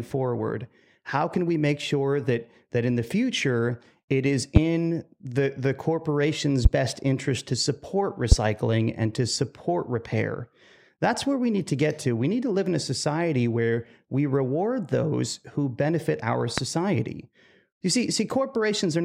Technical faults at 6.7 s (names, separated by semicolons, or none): loud pop